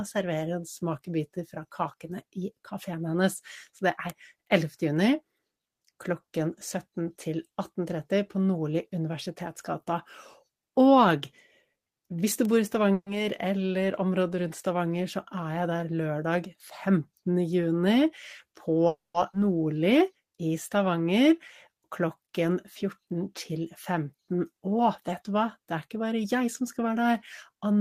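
At 4.10 s and again at 12.45 s there is a bit error spike: a single sample flipped by one bit jumps by a power of two and snaps back, giving one sharp, broadband tick that has nothing to do with the speech around it.

From 12.93 to 13.08 s comes a call audio freeze, likely from packets delayed until the jitter buffer ran dry. The last sound is stretched into a short fading buzz, then about 50 ms of near silence, adding roughly 130 ms of delay with nothing lost. A longer freeze at 18.87 to 19.16 s fills about 270 ms, including around 180 ms of quiet.

Between 15.34 and 16.97 s, jitter buffer speed-up trims pitch-period-sized pieces to cut excess delay. The speech runs at about 108% with pitch unchanged, sounding hurried, and roughly 150 ms is removed. The same happens from 25.57 to 26.97 s at about 109%.

At 19.32 s a skip ahead drops roughly 150 ms of speech. Playback jumps straight forward with only a 10 ms join, so part of the speech is simply missing.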